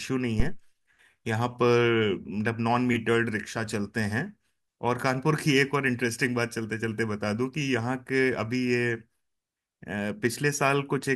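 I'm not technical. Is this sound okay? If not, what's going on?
No. At 0.40 to 0.63 s there's a phantom power thump: microphone power switching while recording causes a deep electrical thud, not a breath pop or a bumped microphone.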